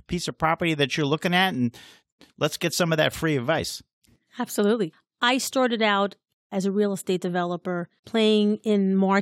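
No technical faults are audible.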